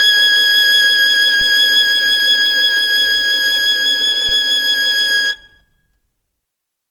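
A short music clip with two problems. Across the whole thing the tones come out rough and grainy instead of clean, with a noisy, sandy texture where sustained material should be smooth. The top end is still there, reaching up to about 20.2 kHz, so it isn't the muffled sound of a narrowed band. That fits likely Opus compression in its CELT music mode, running short of bits at a rate around 24 kbps and filling the starved bands with folded or noise-like content. Then there are two DC steps, at 1.41 s and 4.29 s. At each one the waveform's zero line suddenly jumps, and you hear a low thump while the music carries on unchanged. The offset doesn't hang around. It drains away the way a 20 Hz high-pass would pull it back toward zero.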